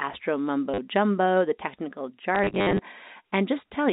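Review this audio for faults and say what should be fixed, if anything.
Packet loss with last packet repeated, at 0.74 to 0.78 s just before "jumbo the technical", and at 2.35 to 2.79 s just after it. Each gap is filled by replaying the previous packet. The first loss is a 40 ms stutter. The second scatters about 230 ms of loss across 440 ms, with runs up to 60 ms that buzz near 100 Hz, which fits 10 ms packets. All of this sits within band-limited G.711 telephone audio. Add proper packet loss concealment and a larger jitter buffer, or fix the lossy network path.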